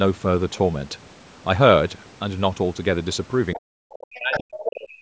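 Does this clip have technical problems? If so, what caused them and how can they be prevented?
Yes. Other side's voice leaking through: a second, fainter voice appears at 3.53 to 3.59 s, 3.92 to 4.4 s and 4.63 to 5.01 s, about 15, 5 and 10 dB below the main speech. This is likely echo the canceller failed to remove, with the far end's loudspeaker sound picked up by the microphone. Unlike crosstalk from another line, it coincides with the main talker's own voice being pushed down. Prevention: use a headset or a better-tuned echo canceller so loudspeaker sound never reaches the microphone.

Speech suppressed in double talk: the main speech drops by up to about 40 dB from 3.55 to 3.76 s and again from 4.02 to 4.99 s, roughly 0.2 s and then a full second. The likely cause is that both sides were talking at once and the echo canceller turned everything down. A network dropout would not fall in step with the leaking voice the way these drops do. 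Prevention: use an echo canceller with proper double-talk detection, or a headset, so suppression isn't triggered.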